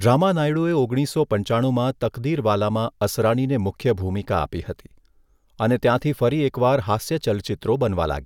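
A short speech recording with nothing technically wrong to point to at any moment.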